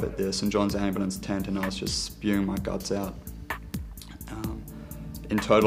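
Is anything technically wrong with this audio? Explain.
Yes. From 2.72 s to 4.46 s there are periodic USB or driver dropouts: about seven ticks, spaced exactly 0.25 s apart. Each time, something blocks the USB bus or audio driver and a tiny fraction of a millisecond of audio is skipped outright, so the waveform jumps and makes a click. The strict timing tells this apart from random crackle or dust-like clicks, which fall unevenly.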